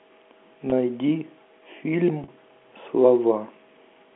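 Packet loss with pitch repetition at 0.70–0.72 s (20 ms) and 2.24–2.28 s (40 ms): rather than silent dropouts, the last pitch cycle repeats, giving a brief buzzy hold, which fits one and two lost 20 ms packets.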